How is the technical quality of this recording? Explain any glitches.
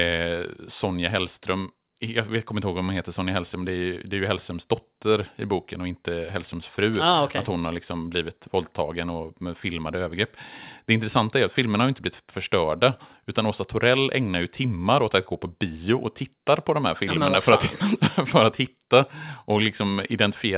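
The technical quality of this recording shows no glitches to explain.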